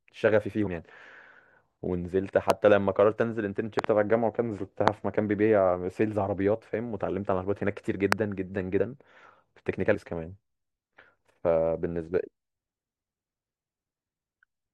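Compressed frames skipped at 0.66 s: roughly 70 ms of the speech never plays, about three 21.3 ms frames dropped as missing or rejected by the decoder. The overlapping neighbours blend the join into a short smeared blip, not a click.

Loud pops at 2.50 s, 3.79 to 3.86 s (a quick double), 4.88 s and 8.12 s: sharp pops around 20 to 25 dB above the speech, which carries on underneath. They are likely voltage spikes from a plug, switch, static or driver glitch.

Compressed frames skipped again at 8.79 s and 9.94 s: each time about five frames, roughly 100 ms, vanish, and the speech lurches forward through a brief smeared join.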